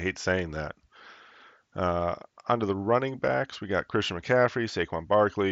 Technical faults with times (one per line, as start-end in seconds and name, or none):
none